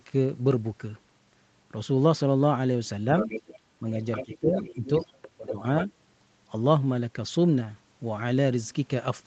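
The echo canceller likely failed to fully remove the far end's voice from the loudspeaker, so the other side's voice leaks through from 3.19 to 3.59 s and again from 4.12 to 4.38 s, sitting about 10 dB under the talker. A quieter stretch follows from 4.56 to 5.29 s, around 20 dB down, and a last brief scrap comes at 5.46 to 5.53 s, back near 10 dB below.

Where both sides talk at once, the canceller likely could not tell the talker from the echo and turned everything down. This speech suppressed in double talk starts at 4.25 s and runs to 4.85 s, with the talker's level dropping by roughly 10 dB. It returns from 5.35 to 5.6 s with a deeper cut of about 20 dB. Through the call path, the audio stops at 8 kHz.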